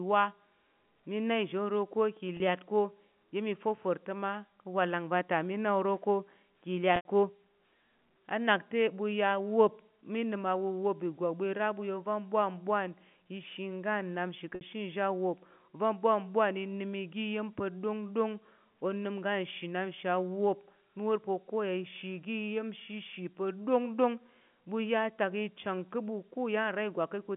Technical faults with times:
2.37-2.40 packet loss with pitch repetition
6.96-7.05 packet loss with pitch repetition
14.55-14.61 packet loss with pitch repetition

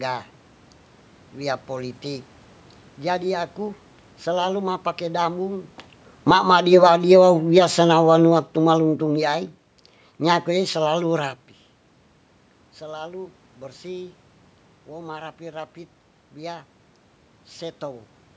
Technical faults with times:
6.15-11.29 automatic gain falling

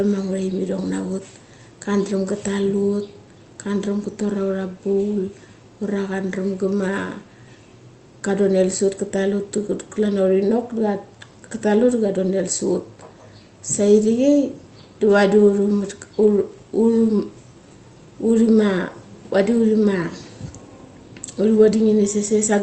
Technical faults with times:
none

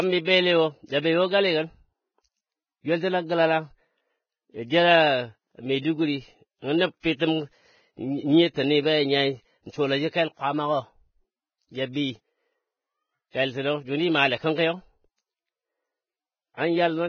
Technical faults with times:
0.00-17.09 Vorbis compression
0.86-0.89 pre-echo
8.54-8.56 pre-echo
11.93-11.95 pre-echo
16.54-16.57 pre-echo

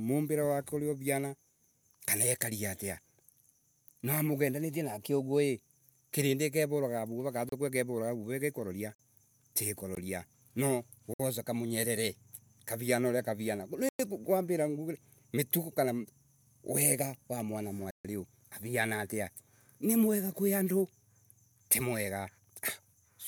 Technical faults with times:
7.49-7.52 block of digital silence
8.95-8.99 block of digital silence
9.95 block of digital silence
11.14-11.19 block of digital silence
13.89-13.99 block of digital silence
17.91-18.05 block of digital silence

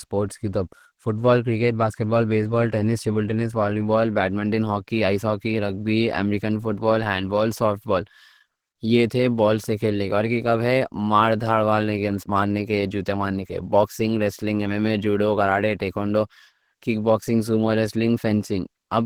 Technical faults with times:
0.00-19.05 Opus compression

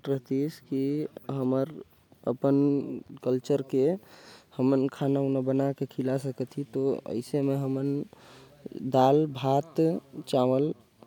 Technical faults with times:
none

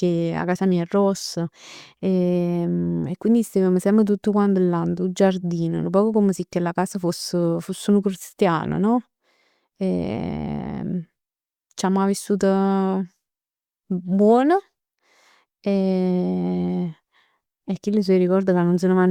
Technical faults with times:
none

